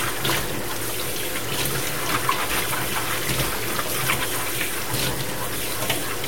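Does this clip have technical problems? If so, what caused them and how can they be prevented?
Yes. Throughout the clip there is grainy distortion that rises and falls with the sound itself. The likely cause is low bit depth without dither: about 4 bits, truncated, with error only around 10 dB below the signal. Unlike steady hiss, it vanishes in silence and clings to each sound. Keep more bits, or add dither before reducing word length.

At 2.49 s a brief blip points to damaged data in a compressed stream. The decoder lost sync and skipped to the next frame header. Checksums and reliable transfer prevent this.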